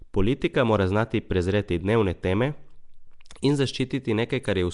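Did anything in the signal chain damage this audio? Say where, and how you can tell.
Yes, at the codec stage, throughout the speech. A rough, hissy halo and smeared, underwater sound point to likely Nellymoser compression, where weak bands get no bits and are filled with noise. A spectrogram shows nothing above 10.6 kHz and speckled noise between harmonics.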